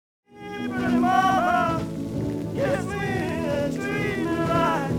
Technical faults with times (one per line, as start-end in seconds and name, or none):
0.00-4.99 channel delay (doubling)